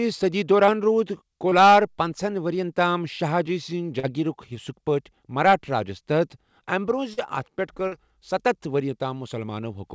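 Brief smears and wobbles break the speech at 0.66 s and 1.49 s (about 20 ms each), at 3.99 s just after "جی سنٛز", at 7.13 s just before "اتھ پٮ۪ٹھ", and at 7.87 s between "اتھ پٮ۪ٹھ" and "ستتھ وری" (about 40 ms each). These are short concealed packet losses: the audio arrived too late, so the receiver extended the preceding sound to cover each gap before blending back. The whole call is band-limited, with nothing above 8 kHz, which fits a wideband codec such as G.722.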